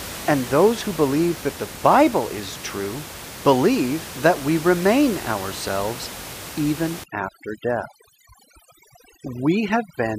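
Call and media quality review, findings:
Overdone noise removal, 7.04 s to 10.2 s: background drops and breaks up into twinkling specks. Denoiser set too strong, gating bands near its noise estimate, room noise about 14 dB below speech.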